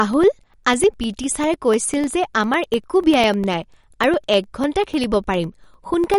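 Speech recording with two faults. Across the whole clip the top end stops dead at about 11.2 kHz, and the sound has a watery, swirling quality, with sibilants turning metallic and consonant onsets smeared. That pattern is most consistent with MP3 compression at a bitrate that points to something around 50 kbps. Bits ran short, so the encoder imposed a fixed treble cut-off and let weak spectral lines switch on and off from frame to frame. Separately, from 0.14 s to 6.14 s a steady tick repeats every 0.1 s, around seventy in all. These are periodic USB or driver dropouts: at each interval something stalls the bus or the audio driver, and roughly a millisecond of audio is replaced by silence. That brief gap in the ongoing signal is what produces the evenly spaced clicks.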